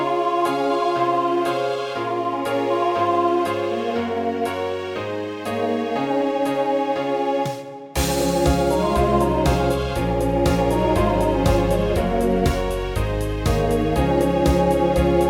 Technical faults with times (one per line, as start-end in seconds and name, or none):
none